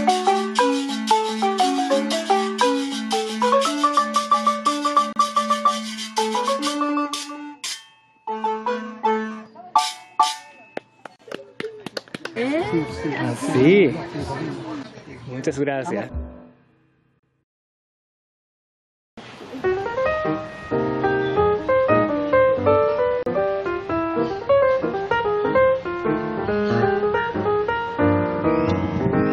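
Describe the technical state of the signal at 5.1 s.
At 5.13 s the sound drops out for about 33 ms, until 5.16 s. This is a gap at a join of encoded pieces. Two separately encoded segments meet here, and the encoder's start-up delay and end padding were never trimmed. The silence has smeared edges, then the sound resumes where it stopped.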